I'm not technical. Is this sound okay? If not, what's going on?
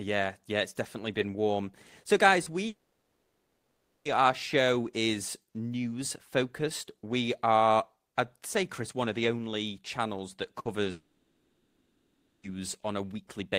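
No. There are four kinds of problems in this speech clip.

Repeated buffer at 2.43 to 2.46 s and again at 8.47 to 8.49 s: fresh audio arrived late, so the same tiny slice, about a hundredth of a second, replayed, giving a quick stutter.

Long network dropout at 2.67 to 4.07 s and 10.91 to 12.45 s: the sound fades out, goes silent, then resumes with a chunk of about 1.4 and 1.5 seconds missing, likely from the connection dropping.

Burst of packet loss at 10.59 to 10.67 s: a short stretch of speech never arrived, so the last sound is stretched into a fading buzz or hiss before the audio jumps ahead.

Short concealed packet loss at 10.83 to 10.87 s: a very small piece went missing and was patched over, heard as a brief smear or blip.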